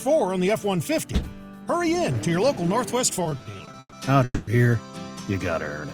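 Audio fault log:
3.23–3.94 s, repeated stalls (stutter): nine short gaps, longest 130 ms, filled with repeated, fading sound covering 41% of the span. These show as smeared, stretched spectrogram stripes, as late packets keep draining the jitter buffer.
4.24–4.49 s, call audio freeze: sound holds for 230 ms as a buzz or hiss that fades, ending in 30 ms of flat silence on the waveform, likely from delayed packets emptying the jitter buffer.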